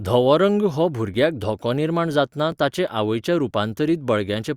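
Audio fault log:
1.14 s and 2.52 s, dropped buffer (overrun): two short jumps where the speech skips forward with no gap. The first falls after "धवो रंग हो" and the second after "धोको निर्माण जातना". Each skip loses only a few milliseconds, which points to a likely overrun: samples were overwritten before being read, and the two edges were spliced together. Because no silence is inserted, this is not an underrun dropout. The loss is too short to take out any syllable.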